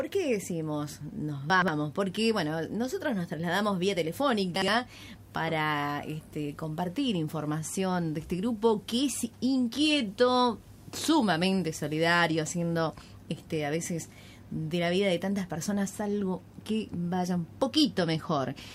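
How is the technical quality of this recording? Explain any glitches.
Two short glitches break the flow, both chunks out of order. At 1.5 to 1.68 s a 60 ms chunk plays two chunks late, and at 4.56 to 4.68 s another plays one chunk late. The audio is all there but resequenced, so each spot sounds briefly jumbled.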